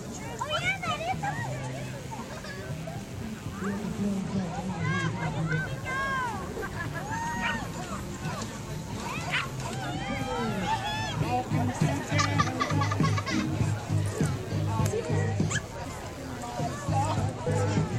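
Throughout, computer activity noise: processor and peripheral load changes disturb the audio circuit's shared ground, adding a buzzy chirping pulsing near a hundred times a second, well below the main sound.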